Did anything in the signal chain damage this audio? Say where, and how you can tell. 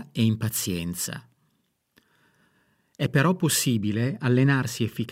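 Yes. From 3.8 s to the end, the speech turns dull and muffled, as if a blanket were thrown over it. The highs fall away on a smooth, gentle slope, about 8 dB down at 10 kHz relative to 1 kHz, with no sharp cutoff. That shape points to de-emphasis applied wrongly in the processing or playback filter stage: a treble cut meant to undo pre-emphasis landed on audio that never had that boost, or was applied a second time.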